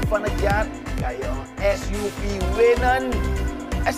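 From 0.65 to 2.29 s, channel delay (comb filtering) makes the sound rough and slightly doubled: one channel arrives about 20 ms late, and summing to mono cancels a fixed comb of notches starting near 30 Hz. Unlike flanging, the notches never sweep, and unlike an echo, no separate repeat is heard.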